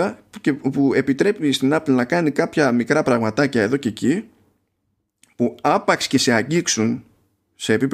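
Nothing here stands out as a technical fault; the speech just carries on steadily with nothing going wrong along the way.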